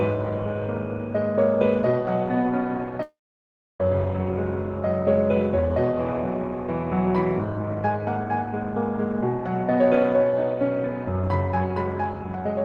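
A long network dropout at 3.02 to 3.80 s: the sound briefly buzzes and fades into 0.66 s of silence, likely from lost packets, and 0.77 s never returns.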